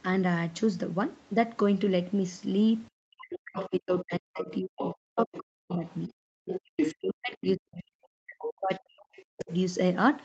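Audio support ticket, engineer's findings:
Speech suppressed in double talk, 3.18 to 6.1 s and 6.69 to 9.5 s. Likely cause: the echo canceller could not separate near-end speech from loudspeaker echo, so it attenuated both. The talker dips or breaks up, as deep as about 40 dB, roughly two seconds per span.

Other side's voice leaking through, 3.32 to 3.69 s, 4.4 to 5.97 s, 6.45 to 6.93 s, 8.39 to 8.78 s and 9.15 to 9.56 s. Likely cause: residual loudspeaker echo not cancelled at the mic. A second voice is audible about 10 dB under the talker, about 15 dB under in the last stretch.

Background gated by the echo canceller, 6.13 to 6.41 s. The canceller clamped the mic while the loudspeaker played. The room tone drops by about 40 dB for about a third of a second, then returns when the canceller releases.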